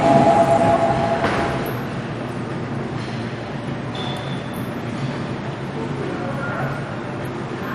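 From start to finish the sound carries heavy damage of the kind MP2 compression leaves. The top end is dull, with nothing above about 14.5 kHz. The remaining bands sound coarse and grainy, with a gurgling churn. Upper bands seem to drop in and out, so the brightness flickers. The likely cause is MPEG Layer II coding starved of bits. The encoder shuts off whole upper sub-bands and roughly quantises the rest, which fits a rate near 56 kbps.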